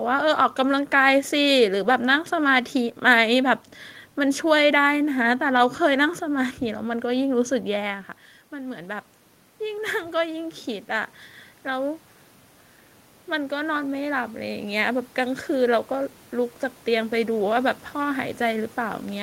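Around 8 seconds the talker drops back from the mic, and the input falls by about 12 dB. From 9.59 to 12.08 s you can hear the automatic gain rising as the AGC tries to make up for it, pulling in about 3 dB so that voice and room noise swell together. It happens again from 13.27 s and keeps climbing until the clip ends, the whole background lifting along with the speech.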